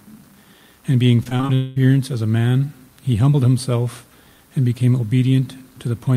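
From 1.23 to 1.51 s, repeated packet loss leaves five brief holes, the longest 24 ms, patched by extending prior audio, so about a third sounds choppy and robotic. A long network dropout likely follows: from 1.55 to 1.79 s the last sound is stretched across nearly all of the gap, about 213 of 220 ms, as a fading buzz or hiss, with no silence.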